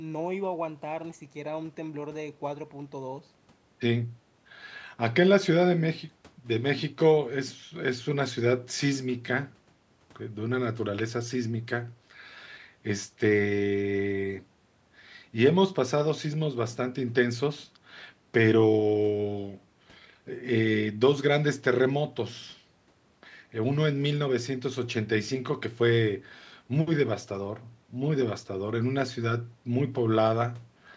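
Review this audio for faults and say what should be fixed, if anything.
Nothing needs fixing in this speech recording: the signal carries the ordinary marks of call microphone processing, with the lowest bass trimmed by its high-pass filter and no content above 8 kHz, and no fault is present.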